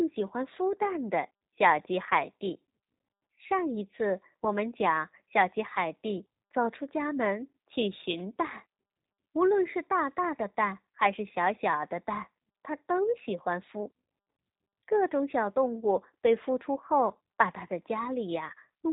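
G.729 codec damage runs through the whole recording, from start to finish. The speech has been rebuilt rather than carried: a vocal tract filter, a pitch predictor and a few coded pulses per 10 ms frame stand in for the real waveform, and that coarse model leaves the voice plainly rough and slightly synthetic. Nothing survives above about 3.8 kHz, so sibilants lose their edge. The sound points to G.729A running at 8 kbit/s.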